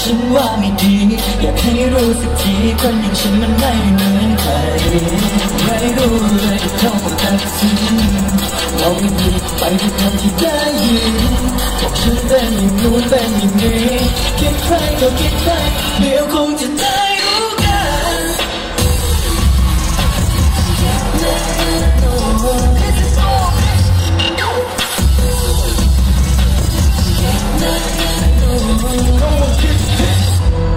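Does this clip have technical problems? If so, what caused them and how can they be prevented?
Yes. Hard clipping throughout: the signal overdrove a stage by about 5 dB, cutting the tallest peaks, a small share of samples, flat into crackle. Lowering gain to leave headroom before each converter or fixed-range stage prevents it.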